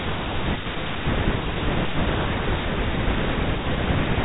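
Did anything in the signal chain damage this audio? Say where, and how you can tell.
No, nothing in the chain damaged this speech.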